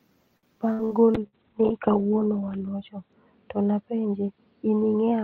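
Repeated packet loss (robotic sound) runs from 0.37 to 1.35 s. Over that stretch the speech keeps breaking up: four separate holes appear, the longest about 59 ms, and each is papered over by stretching out the sound that came just before it. Roughly a quarter of the span is this patched-in material, so the voice turns choppy, with short pieces simply gone between the smeared fills.

A call bitrate drop begins at 1.15 s, overlapping the end of the dropouts, and lasts to the end of the clip. The encoder's rate falls from 32 kbps to about 7 kbps, staying at its lowest for about 1.6 s. At that rate the coding becomes coarse, and the audio bandwidth shrinks from about 20 kHz to 4 kHz, so the speech sounds muffled and watery, losing its crisp high end.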